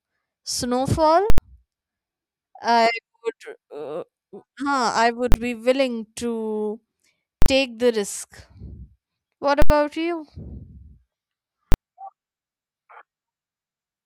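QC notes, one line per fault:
1.30–1.38 s, invalid numbers at full scale: a very loud, hard bang as an 80 ms block of infinite or invalid results is pinned at maximum output.
5.32–5.34 s, invalid numbers at full scale: a sharp pop from a 20 ms block driven to the limit.
7.42–7.46 s, invalid numbers at full scale: a loud bang as a 40 ms block sits at the clipping ceiling.
9.62–9.70 s, invalid numbers at full scale: the same 80 ms bang, with the speech wiped out underneath.
11.72–11.74 s, invalid numbers at full scale: a sharp pop from a 20 ms block at full scale.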